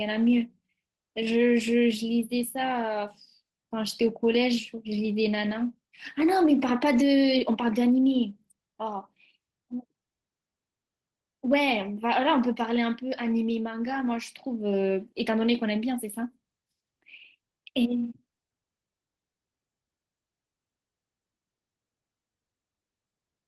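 No faults to report: the speech arrives over a call path whose top end stops at about 12 kHz, consistent with Opus at a low bitrate, and nothing in it breaks, drops or distorts.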